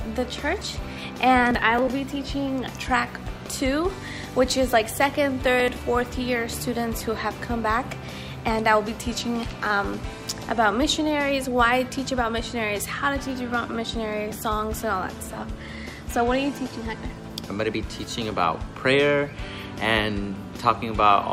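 Processor overload crackle tears through the audio from 1.51 to 1.89 s and 5.60 to 5.77 s. Several roughly 10 ms buffers are skipped across each stretch, leaving gritty gaps.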